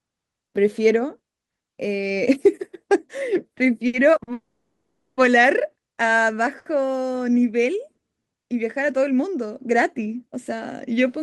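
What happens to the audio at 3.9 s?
At 3.87 to 3.95 s the speech has a short stall from a late packet. A packet missed its playout time, the jitter buffer ran dry, and the receiver stretched the last sound by about 60 ms to cover the gap before resuming exactly where it left off. No speech is lost, but the sound at that point is held unnaturally long with a faint buzz or dip, and everything after it plays 60 ms later.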